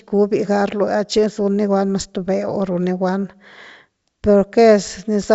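No technical faults are audible.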